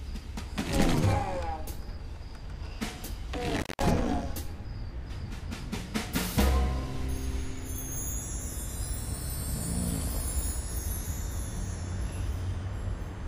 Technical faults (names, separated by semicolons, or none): intermittent contact